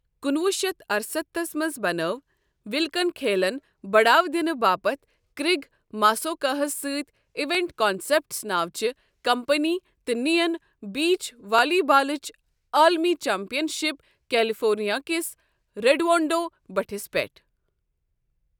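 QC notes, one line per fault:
7.55 s and 11.59 s (just after "نِیَن بیٖچ"): repeated buffer. An 11.6 ms chunk plays twice with a hard join, giving a brief click-buzz that fits a 512-sample buffer. Little or no audio is lost.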